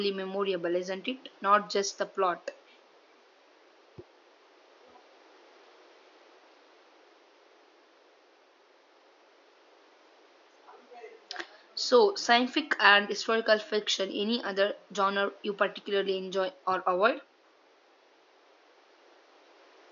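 Nothing stood out on listening to this speech recording, whose only background is a low room noise sitting about 32 dB below the speech.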